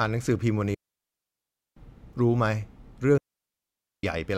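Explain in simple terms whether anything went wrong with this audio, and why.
Two digital wireless dropouts: the receiver muted cleanly after losing data, leaving near-silent gaps from 0.74 to 1.77 s and 3.18 to 4.03 s.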